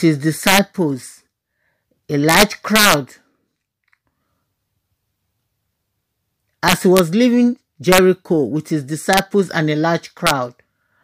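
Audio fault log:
0.47–0.59 s, 2.29–2.94 s, 6.68–6.99 s, 7.92–7.98 s, 9.13–9.19 s, 10.27–10.31 s: integer overflow. Peaks driven about 1 to 3 dB past full scale wrap to the opposite sign instead of limiting, giving harsh cracks far sharper than clipping.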